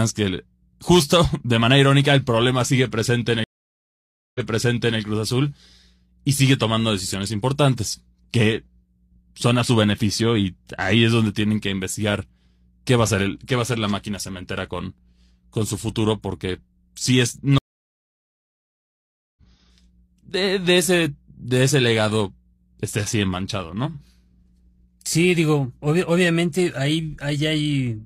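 At 3.44 s, just after "problema sigue presente en", a stream reconnect cuts the speech to about 0.91 s of silence. The restarted decoder resumes about 0.65 s earlier, so that stretch is heard twice. At 17.58 s, after "futuro porque si es", a second reconnect leaves about 1.78 s of silence and resumes roughly a second and a half later, skipping that stretch. Unlike a plain dropout, the audio never picks up where it stopped.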